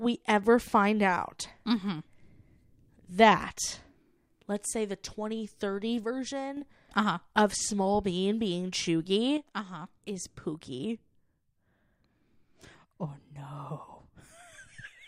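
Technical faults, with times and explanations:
6.04–6.57 s and 9.37–15.07 s: one channel drops out. Speech falls abruptly by about 6 dB, likely from one stereo channel vanishing before the mono sum.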